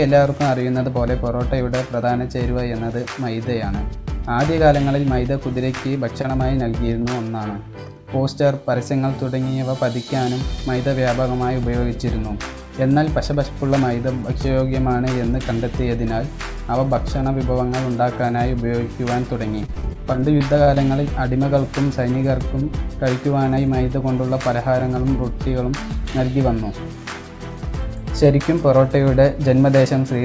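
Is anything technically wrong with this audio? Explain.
Yes. Two brief glitches and one longer choppy stretch are audible, over a call path whose band stops at 8 kHz, which fits G.722 at 64 kbps.

At 6.22 to 6.26 s and again at 7.02 to 7.06 s there is a tiny smear or wobble. Each is a short concealed packet loss: about 20 ms of audio arrived too late or not at all, and the receiver bridged the gap by extending the preceding sound before blending back.

From 19.66 to 20.78 s the sound turns choppy, with bits dropping out. This is repeated packet loss with a robotic sound: nine separate gaps, the longest 31 ms, each patched by continuing the last sound. About 180 ms in total, roughly a sixth of that stretch, is synthetic fill.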